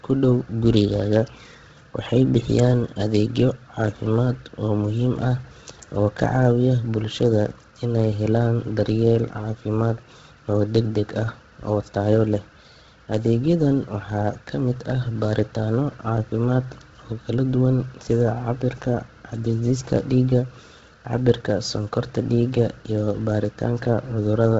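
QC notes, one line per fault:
Throughout: Bluetooth LC3 compression, likely. Nothing in the speech reaches above about 7.8 kHz, so the top end sounds cut off and dull. The damage is heavy. The upper band has a breathy, grainy hiss where detail should be, because the codec discards much of that spectrum and fills it with noise. The coarseness points to a low bitrate, around 16 kbps, coded in 10 ms transform frames.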